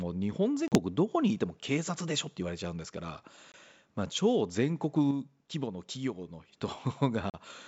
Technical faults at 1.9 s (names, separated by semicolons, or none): none